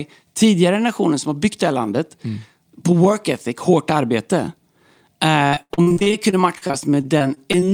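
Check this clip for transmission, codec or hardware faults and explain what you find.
Repeated packet loss (robotic sound) runs from 5.47 s to the end. Packets go missing again and again. Each hole is filled by stretching the preceding sound, with holes up to 72 ms, leaving about a quarter of the stretch patched. The speech turns choppy, with pieces dropped.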